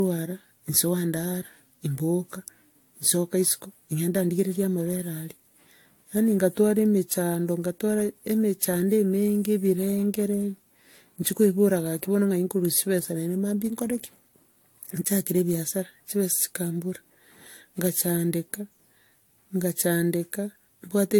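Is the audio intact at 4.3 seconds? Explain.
No. Generation loss runs through the whole speech clip, including 4.3 s. The sound is swirly, smeared and hollow, with blurred consonant attacks and nothing above 19.3 kHz. The likely cause is repeated lossy coding, around four passes, consistent with AAC-LC at roughly 96 kbit/s. Each decode and re-encode quantises the signal again on a shifted frame grid, so noise and spectral gaps pile up beyond what one pass at that rate would leave.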